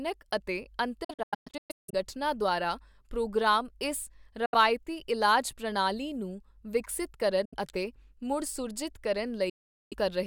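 The speech drops to silence in holes and then resumes as if it had kept playing underneath. From 1.04 to 1.94 s, just before "ਦੁਆਰਾ ਪ੍ਰੋਗਰਾਮ ਇਸ", there is a stuttering cluster of gaps, the longest about 160 ms. Brief holes of about 70 ms follow at 4.46 s, after "ਦੁਆਰਾ ਪ੍ਰੋਗਰਾਮ ਇਸ", and at 7.45 s, after "ਇਲਾਜ ਪ੍ਰਣਾਲੀ ਨੂੰ ਵਿਕਸਤ". A longer 0.42 s silence falls at 9.49 s. This is likely Bluetooth dropout: audio packets reached the headphones too late and were discarded, so the output went quiet until good packets arrived.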